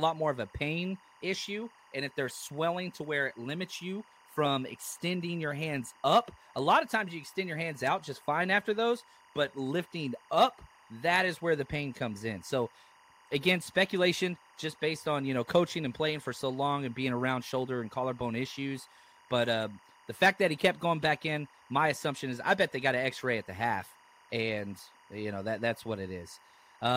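Timecode bleed runs through the whole clip, from start to finish. Linear timecode from an adjacent track or cable has leaked into the speech path, adding its square-wave signal, which flips between tones near 1 kHz and 2 kHz as it encodes each frame at 24 frames per second. Sitting roughly 30 dB below the speech, it comes through as a thin, steady chirping warble behind the voice, most exposed in pauses.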